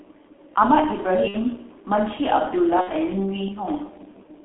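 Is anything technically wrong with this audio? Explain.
Yes. The whole clip of speech carries G.723.1 codec damage. The audio is confined to roughly 300 Hz to 3.4 kHz and sounds muffled and hoarse, with smeared consonants. That fits heavy coding at about 6.3 kbit/s, where a slowly updated voice model in 30 ms frames discards fine detail.

VoIP packet loss concealed by the speech codec occurs twice, at 1.28 to 1.37 s and 2.81 to 2.90 s. Each gap fits two lost 30 ms frames. The decoder extends its last pitch and filter, so the sound is stretched into a buzzy tone or coloured noise that fades, then stays weakened briefly afterwards.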